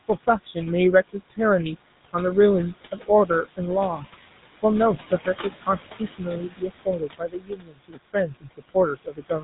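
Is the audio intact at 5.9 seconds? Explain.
No. At 5.9 seconds you're inside a stretch, from 5.61 to 8.15 s, where the noise suppressor cut into the speech itself. It mistook parts of the speech for background and pulled them down with it, by about 22 dB at the deepest. In total it swallows roughly a second and a half of soft consonants and word endings, which come out faint.

The noise suppressor artifacts from its normal work are there too. It pushes the room noise, which sits about 13 dB under the speech, down by about 16 dB between phrases, then lets it come back up under them.

On top of that, the whole clip runs through the GSM full-rate codec, which fits a 13 kbps stream. It builds the voice from a vocal-tract model driven by spaced pulses, so the speech has that buzzy, gravelly roughness. Nothing comes through above 3.8 kHz, so it sounds dull and boxy.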